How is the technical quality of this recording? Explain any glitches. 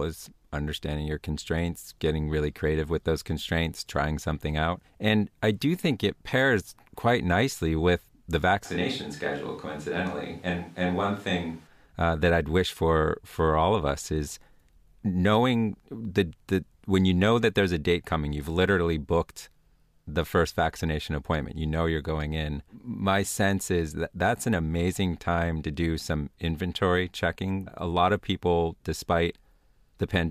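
One glitch is audible, in the speech between 8.67 and 11.66 s: a switch to a distant microphone. The voice abruptly turns roomy and thin, about 5 dB quieter, with background noise near 30 dB below speech. The likely cause is that the close microphone dropped out, leaving a farther one.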